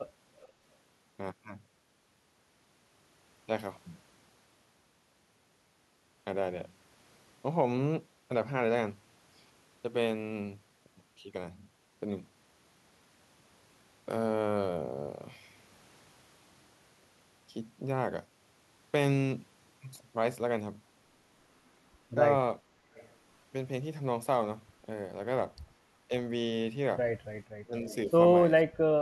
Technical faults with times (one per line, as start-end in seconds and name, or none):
0.41-0.48 echo leak
22.94-23.09 echo leak
27.65-27.87 speech suppressed in double talk
27.88-27.95 echo leak
28.63-29.01 speech suppressed in double talk